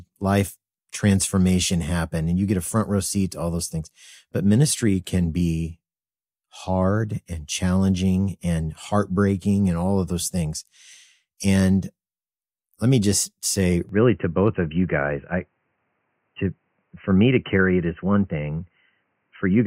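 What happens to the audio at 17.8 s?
At 17.8 s the speech is still inside a stretch running from 13.89 s to the end of the clip where the sound has gone dull and boxy, most likely because the input switched to a poorer device. Nothing above 3 kHz gets through, and a faint new noise floor sits far beneath the speech. On a spectrogram, energy above 3 kHz cuts off sharply at 13.89 s, while the waveform shows no gap and roughly unchanged level.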